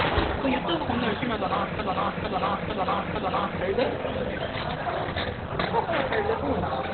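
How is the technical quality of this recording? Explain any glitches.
Quality is poor throughout: the everyday sounds come across muffled, hoarse and boxy, with nothing audible above about 4.3 kHz. That narrow, dulled band points to heavy damage from low-rate Opus compression, likely in its speech-oriented SILK mode at narrowband. Starved of bits, consistent with a rate near 12 kbps, the encoder discards the upper spectrum and models what is left coarsely, which flattens and roughens the detail.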